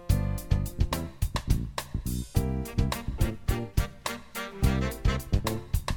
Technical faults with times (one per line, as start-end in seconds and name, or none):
none